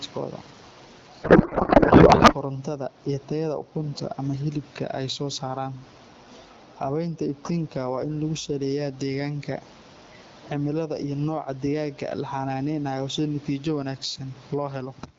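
A speech recording with gain pumping throughout. The gain swings around 15 dB. Loud and soft passages sit close in level, and the speech sounds squashed. The likely cause is input gain set far too high, with a fast limiter clamping each peak. From 1.23 to 2.34 s there is a codec payload misread. The speech gives way to garbled noise and warble that barely tracks it. The decoder is reading the AMR frames with their fields misplaced. The pattern points to octet-aligned packets being read as bandwidth-efficient.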